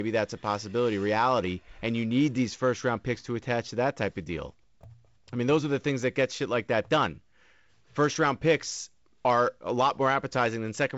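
Speech, sent through G.722 wideband telephone coding with nothing above about 7.7 kHz, contains two blocks of digital silence: a 0.67 ms dropout at 4.84 s, consistent with a 32-sample block, and a 2 ms hole at 6.03 s. Each appears as a brief flat gap on the waveform, with thin vertical click streaks at its edges on a spectrogram.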